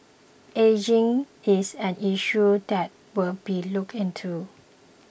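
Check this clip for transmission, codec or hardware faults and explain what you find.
No technical faults turn up anywhere in this speech recording, and the signal stays continuous and intact throughout.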